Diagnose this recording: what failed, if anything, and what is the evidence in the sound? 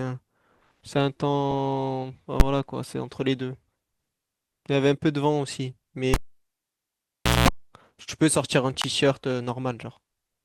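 The processing stage's arithmetic failed twice. A calculation produced infinite or invalid numbers, which were clamped to the largest sample value, pinning the output at full scale for a whole buffer. At 2.40 s the affected block lasts about 10.7 ms, which fits a 512-sample buffer, and is heard as a single bang. From 8.82 s to 8.84 s the block is twice as long, about 21.3 ms, fitting a 1024-sample buffer. There the invalid numbers at full scale give a loud pop at each edge with nothing in between.

DAB burbling appears at 3.40 s, a codec and reception fault. Weak DAB reception let bit errors slip past the error correction into the MP2 audio data, at a bit error rate of a small fraction of a percent. Corrupted samples put short blips of noise into single sub-bands, and corrupted scale factors make sub-bands jump in level for up to a frame. Seven frames were hit.

The analogue wiring failed when a live cable was pulled and plugged in between 6.14 s and 7.49 s. 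A pop marks the disconnection. Near silence follows for about 1.3 s, within which comes a burst of 60 Hz mains buzz lasting about 0.2 s while only the plug tip makes contact. A second pop follows as the full connection seats and the speech returns.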